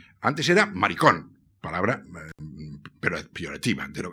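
At 2.29 s, just after "era maricón palabra", the speech is interrupted by an intermittent contact fault lasting until 2.40 s. A loose plug or cable connection briefly lost contact, and the signal path was open for about 66 ms. The speech cuts out abruptly for that span, with crackle where the contact breaks and remakes, and faint hiss audible in the gap before the speech returns.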